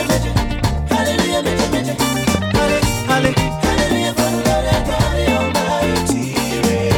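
Loud pops at 2.35–2.37 s and 3.25–3.27 s: each is a single sharp click roughly 15 dB above the continuing sound, likely from a brief voltage spike.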